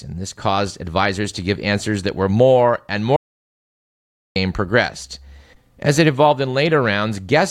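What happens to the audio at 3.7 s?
At 3.7 s the speech has dropped out completely: from 3.16 to 4.36 s, about 1.2 s, there is dead silence with no room tone, and the speech cuts off and resumes mid-flow. This audio dropout to silence likely comes from the input being lost while the recorder kept writing silence.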